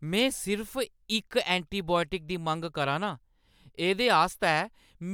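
Nothing goes wrong anywhere in this stretch of speech, so there's no fault to point to at any moment.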